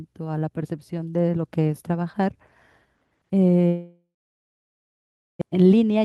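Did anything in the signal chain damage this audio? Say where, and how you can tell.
Yes. At the network stage there is a long network dropout from 3.67 to 5.43 s. The receiver stretches the last sound into a fading buzz, then about 1.3 s of near silence follows. Speech resumes with roughly a second missing, the likely result of packets that never arrived.

At the jitter buffer, a jitter buffer speed-up runs from 5.51 s to the end at 6.04 s. The buffer holds more audio than it aims for and is cutting the delay. It removes pitch-period-sized pieces, about 40 ms in total, so speech runs at 107 % speed with unchanged pitch and sounds hurried.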